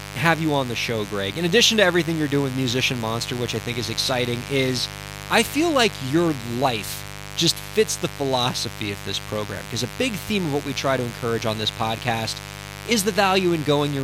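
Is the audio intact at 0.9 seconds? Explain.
No. At 0.9 seconds the speech carries mains buzz, and it runs through the whole clip. Sharp switching spikes from the 50 Hz supply leak into the signal twice per cycle, so the hum repeats 100 times a second. Those spikes stack up harmonics that climb into the kilohertz range. The result is a steady, raspy buzz sitting under the speech. It sits roughly 15 dB below the speech in level.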